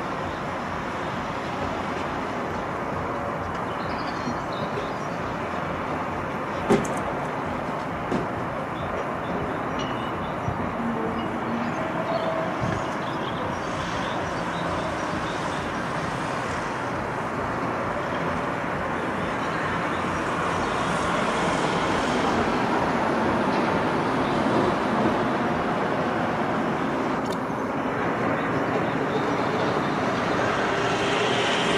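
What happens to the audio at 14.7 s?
Nothing goes wrong at 14.7 s; the audio plays through that moment intact, with no dropout, click or other fault.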